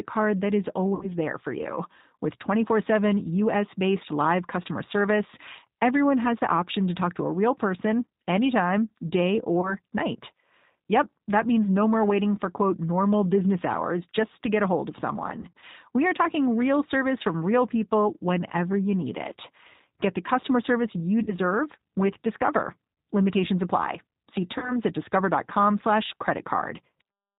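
The whole clip is speech squeezed through the G.729 codec at 8 kbit/s, so nothing above 4 kHz survives and it sounds plainly rough and synthetic. Packet loss concealed by the speech codec hits at 0.95, 9.61, 15.42, 21.23 and 24.58 s, with 20 to 100 ms of audio lost each time, where the decoder stretches the sound into a buzzy tone or coloured noise that fades.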